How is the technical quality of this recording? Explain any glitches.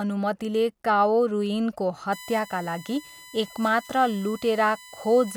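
One fault degrades the recording: from 2.12 s to the end, a USB whine sits under the speech. It is a fixed-pitch tone based on 1 kHz and strongest at 2 kHz, roughly 20 dB below the speech. The USB bus draws current in 1 ms frames, and that pulsing leaks in through power or ground. On a spectrogram it appears as unbroken horizontal lines at 1 and 2 kHz.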